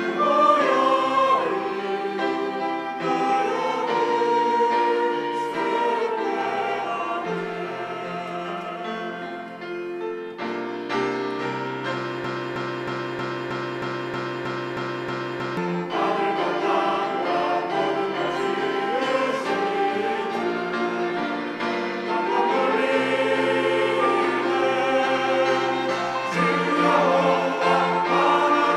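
A broken-record loop runs from 12.24 to 15.57 s, where one 316 ms fragment repeats exactly, back to back, 11 times. The player, encoder or stream likely stalled and kept resending its last fragment, so the audio due in that span is lost.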